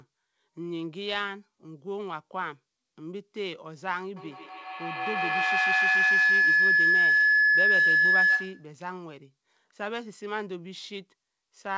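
From 4.17 to 8.76 s, a runaway microphone-loudspeaker loop produces a feedback howl near 1.5 kHz, pulsing about every 150 ms, peaking about 11 dB above speech.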